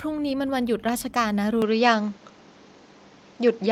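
Speech that turns duller from 1.62 s to the end, losing everything above 7.6 kHz, shifting level by a few dB and gaining faint new background noise, likely an input switched to a poorer device.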